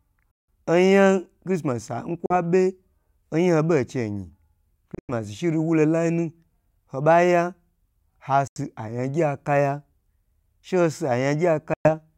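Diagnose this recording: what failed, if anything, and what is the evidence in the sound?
Bluetooth dropouts cut the speech to silence at 0.31–0.48 s, 2.26–2.34 s, 4.95–5.11 s, 8.47–8.59 s and 11.74–11.89 s, losing about 42 to 168 ms each. The 4.95 s hole is broken up, with the longest gap 98 ms. The stage is likely the wireless playback link: packets arrived too late and were discarded, so output stopped abruptly, and each time the sound resumed further along, as if it had kept playing.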